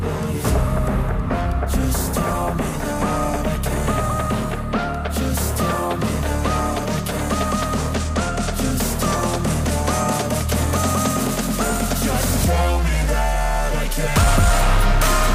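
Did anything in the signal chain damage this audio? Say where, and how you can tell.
No, no signal-chain damage heard.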